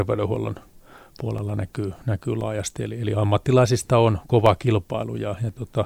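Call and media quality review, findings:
Periodic USB or driver dropouts in speech: regular ticks from 0.36 s to 5.49 s, spaced 1.02 s apart, roughly seven events. Each loses about 2 ms, replaced by silence. Likely cause: USB bus or audio driver blocked at a fixed interval.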